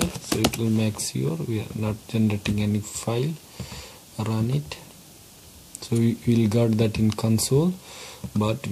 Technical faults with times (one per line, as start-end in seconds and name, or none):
7.76 dropped samples